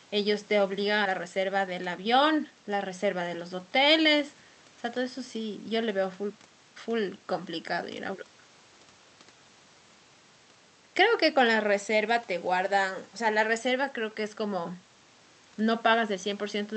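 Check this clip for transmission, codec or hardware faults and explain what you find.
Two transmission faults show up, both near the start. The sound carries typical call-codec coding noise, and its top end stops at 8 kHz.

At 1.05 s there is a skip ahead. About 400 ms of audio never plays. Later audio was already waiting, so the stretch was dropped and playback jumped straight to it. Nothing fills the gap. The two sides are butted together, so the sound lurches forward abruptly and part of the speech is simply gone.

From 1.19 s to 2.90 s comes a jitter buffer speed-up. The buffer held more audio than its target. To shrink that delay, it trimmed many short pitch-period pieces in a row, roughly a fifth of a second in total. Speech runs at about 111% speed while keeping its pitch. The result sounds hurried for those seconds, then settles.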